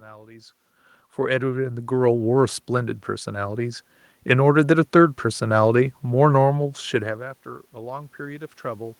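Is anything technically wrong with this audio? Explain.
Yes, there's an automatic gain rising fault. From 1.15 s to 5.77 s the gain control decides the input is too quiet and slowly turns itself up by about 9 dB, so the speech and the room noise swell together. The level shifts near the start and around 7 s are just the talker moving.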